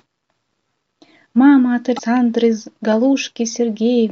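At 1.95 s, damaged data in the compressed stream causes a brief disturbance lasting about 55 ms. The decoder loses sync and skips to the next frame header.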